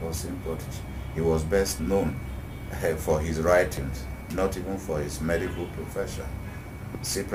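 The recorder likely works in 2-second chunks and drops a sliver at each handover, audio missing between chunks: at 1.79 s and again at 3.77 s, about 20 ms of sound vanishes and the two sides butt together with no gap, heard as brief skips.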